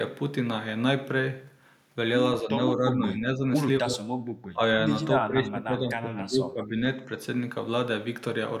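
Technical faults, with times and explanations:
2.42 to 2.59 s, 2.77 to 3.43 s, 3.81 to 4.08 s, 4.53 to 4.63 s and 5.21 to 6.78 s: speech suppressed in double talk. The speech dips in level, by about 5 dB at first and up to about 20 dB later. The cause is likely an echo canceller that mistook the talker for loudspeaker echo while both sides spoke, and turned both down.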